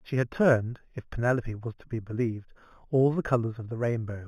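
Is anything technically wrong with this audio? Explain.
Yes. Throughout the speech there is imaging from linear upsampling: straight-line interpolation, apparently from an 8 kHz rate, dulls the top and leaves faint mirror images between 4 and 8 kHz, roughly 35 dB down, adding a light metallic shimmer on sibilants.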